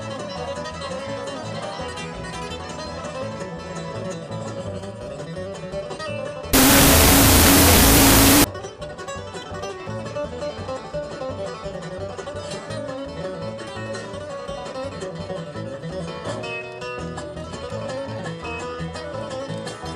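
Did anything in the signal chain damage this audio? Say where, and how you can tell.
Yes. A wrong sample width fault runs from 6.53 to 8.44 s and points to the sample-format conversion stage. In that span the sound collapses into loud, harsh noise with the original only faintly audible beneath it, slowed to half speed and an octave lower. This fits 16-bit integer data being read as unsigned 8-bit. Each 16-bit sample is split into two separate values, which doubles the sample count and halves the playback rate. Only the high bytes still follow the real waveform, and the low bytes turn into noise.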